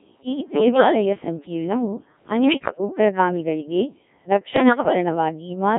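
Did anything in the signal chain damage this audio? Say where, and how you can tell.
Yes. Throughout, the speech sounds robotic and buzzy, confined to roughly 150 Hz to 3.5 kHz, with the natural texture of the voice replaced by a synthetic, sine-like hum. That is the Codec 2 vocoder at the codec stage, and the heavy damage fits a very low rate of about 1.3 kbit/s. The decoder rebuilds speech from pitch, voicing, energy and a coarse spectral envelope rather than preserving the waveform, so everything beyond a single clean voice gets smeared into buzz.

Three bursts sound worse still, jumping abruptly in pitch, loudness and tone colour and collapsing into warbles and bleeps: 0.32 to 1.05 s, 2.44 to 2.78 s, and 4.56 to 4.93 s. These are bit errors on digital voice radio, arising on the radio link before decoding, with the middle burst the most garbled. At such a low bitrate each corrupted bit steers pitch, level, voicing or spectrum for an entire frame, so a few percent of flipped bits scramble the synthesis outright.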